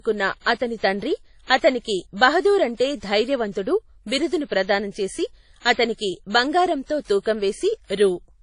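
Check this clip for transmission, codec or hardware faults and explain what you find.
One codec fault runs through the whole clip. WMA compression, throughout: the speech has a hard ceiling at about 10.1 kHz and a ringing, washy texture with hiss that swells and fades with the voice. That points to a long-block transform codec, likely WMA at around 32 kbps, discarding weak spectral lines and smearing quantisation noise over tens of milliseconds.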